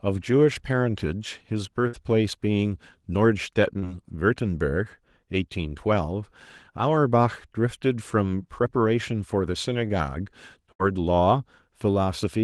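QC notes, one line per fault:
1.87–1.95 s, burst of packet loss: about 60 ms is filled by holding the last sound and fading it into a buzz or hiss, then the audio jumps ahead with about 60 ms missing. The audible skip sets it apart from a brief smear.
3.79–3.84 s, short concealed packet loss: a roughly 30 ms patch, extrapolated from the preceding sound's pitch or noise, blends back into the real audio as a brief smear or wobble. It is too short to become a held buzz or an obvious jump.
10.72–10.81 s, burst of packet loss: about 70 ms of continued, decaying sound stands in for lost packets, and playback resumes about 80 ms further on. The fade-out and the skipped material distinguish it from the short concealment at 3.79 s.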